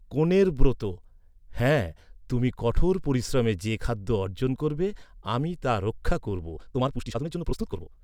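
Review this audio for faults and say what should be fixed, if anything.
From 6.54 s to the end, right after "আমি তা রক্ষা করব", the speech rushes at about 1.98 times its pace, yet its pitch holds steady. A wrong playback speed would raise the pitch too, so this is likely a time-stretched section, squeezed by dropping short slices to fit a length. To prevent it, trim or re-edit the material to the target length instead of compressing it in time.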